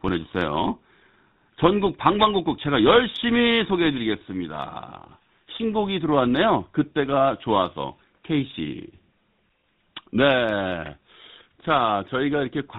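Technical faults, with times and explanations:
Throughout: GSM full-rate codec. The speech has a buzzy, gravelly roughness, which fits the roughly 13 kbps GSM full-rate coder. It models the vocal tract and drives it with sparse, regularly spaced pulses. Nothing above 4 kHz survives, so the sound is dull and harsh.
1.54 to 1.57 s: GSM bit errors. A brief squawk and pop lasting about 30 ms breaks the speech. Flipped bits corrupted the decoder's filter, pitch or gain values, which fits a few damaged frames. Each damaged frame bends the spectrum or jumps the level.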